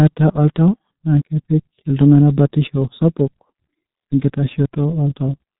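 From start to finish the speech sounds muffled, hoarse and boxy, with smeared consonants and no brightness at all. That is heavy G.723.1 codec damage. At around 6.3 kbit/s the coder rebuilds speech from a coarse model refreshed only every 30 ms, and it passes nothing above 3.9 kHz.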